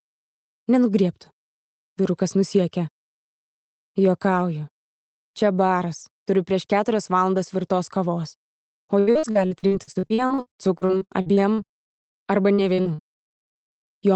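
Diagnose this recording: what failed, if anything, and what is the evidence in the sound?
Network stage: repeated packet loss (robotic sound) from 8.99 to 13.93 s. Gaps of up to 75 ms were patched by stretching earlier audio, leaving choppy sound with pieces missing.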